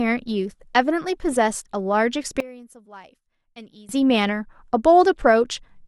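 From about 2.40 to 3.89 s the speech suddenly drops by about 22 dB and turns faint, then comes back. That's likely one channel inverted: with one side's polarity flipped, the shared centre content cancels in a mono sum, leaving just a faint difference signal.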